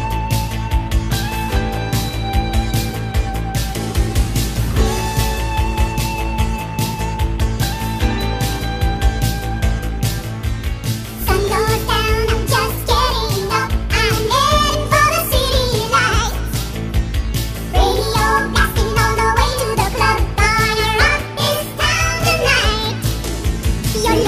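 Between 7.42 and 8.57 s, something in the signal path injects a train of clicks, likely electrical interference from nearby equipment or a faulty connection or power supply. Pulses of much the same shape arrive at a regular rate of about 4.4 per second, roughly seven in all, each reaching about the level of the surrounding audio. The result is a steady ticking that sits on top of the sound for just over a second.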